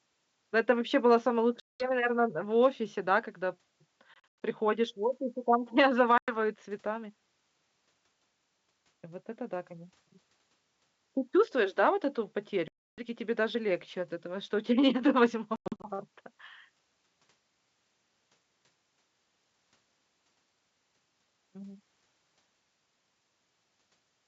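Hard-edged silent holes break the speech at 1.60–1.87 s, 4.14–4.42 s, 6.18–6.36 s, 12.68–13.06 s and 15.56–15.88 s. They total about 200, 180, 100, 300 and 200 ms. The second and fifth are broken into several gaps, the longest 100 ms. After each hole the speech comes back with brief, slight distortion that settles within tens of milliseconds.

This is packet loss on an ADPCM call. The missing packets were filled with silence, and the receiver's adaptive predictor and step size drifted out of step with the sender's until they realigned. The wideband G.722 coding around the holes stays clear, with only faint upper-band hiss.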